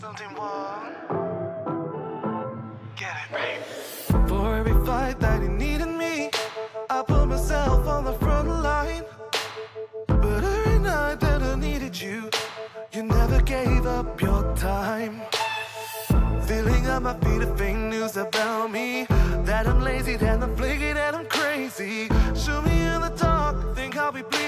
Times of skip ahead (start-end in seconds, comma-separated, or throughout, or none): none